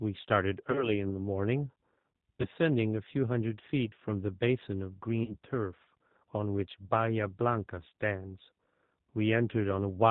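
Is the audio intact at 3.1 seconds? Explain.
No, the speech at 3.1 seconds carries G.729 codec damage, which runs through the whole clip. The codec rebuilds each 10 ms frame from a vocal tract filter, a pitch estimate and a few sparse pulses, so the speech sounds plainly rough and synthetic, consistent with a low-rate setting near 8 kbit/s. On a spectrogram, energy stops at a hard ceiling around 4 kHz, and the harmonics below look smeared rather than crisp.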